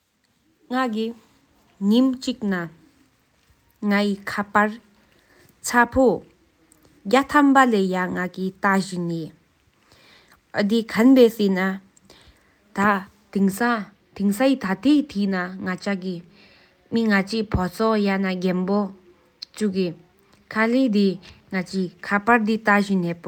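No faults are audible anywhere in the speech recording.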